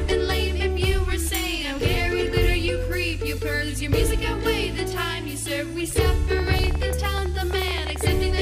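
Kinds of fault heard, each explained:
Train of clicks: roughly thirty pops from 6.32 to 8.08 s, about 14 per second, unevenly spaced, about 5 dB above the sound, likely interference.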